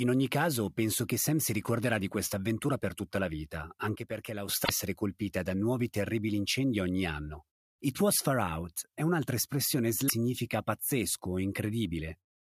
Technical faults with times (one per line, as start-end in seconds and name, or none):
3.95-4.49 sudden gain jump
4.61-4.70 damaged data in a compressed stream
10.05-10.10 damaged data in a compressed stream